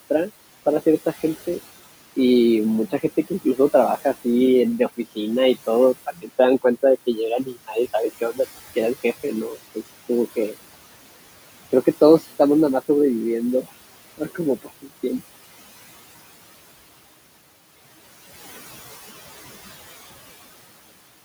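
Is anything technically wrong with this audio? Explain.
Yes. Two related faults come from the noise suppressor.

Noise suppressor artifacts run through the whole clip. The room noise sits about 18 dB below the speech, and the suppressor pulls it down by about 16 dB wherever it judges a band to be steady noise, recalculating frame by frame. The background drops away in the gaps and swells back under the talker. On a spectrogram the noise floor pumps between phrases.

Speech cut by the noise suppressor happens at 6.06 to 6.29 s, 14.18 to 14.39 s and 14.62 to 15.21 s. The suppressor mistook quieter parts of the speech for noise and turned them down with the background, by about 15, 13 and 17 dB respectively. In each span, about a fifth or a tenth of a second of sound is affected. Those syllables sound swallowed or faint. The waveform shows sudden dips in the envelope, and the spectrogram shows speech energy abruptly thinning out.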